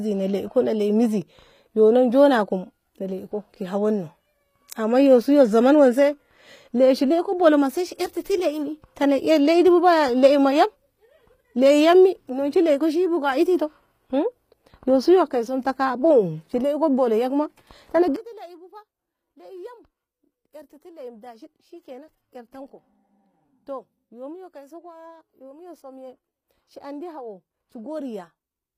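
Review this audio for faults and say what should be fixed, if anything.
Throughout, the speech has gritty, metallic treble and nothing above 15.4 kHz. This likely comes from HE-AAC compression synthesising the highs at a low bitrate, around 24 kbps. Encode at a higher bitrate, or use plain AAC without band replication.

From 18.16 s to the end, the mono sum drops by about 18 dB. One channel inverted is the likely cause, so the shared centre content cancels. Check each channel's polarity and test a mono fold-down before export.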